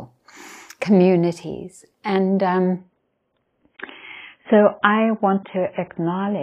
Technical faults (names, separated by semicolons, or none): adaptive stream at a lower bitrate